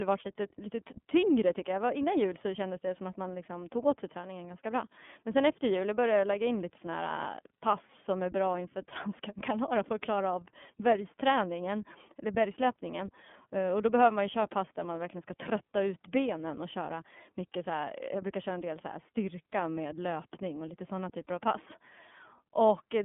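Throughout, the speech shows iLBC codec damage. Only 200 Hz to 3.4 kHz passes. Separately coded 30 ms frames sound plainly rough and synthetic.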